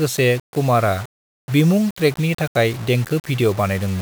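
Throughout the speech, grainy distortion tracks the signal, roughly 20 dB down. Quiet stretches sputter or vanish. This is likely low bit depth without dither, consistent with 5-bit rounding.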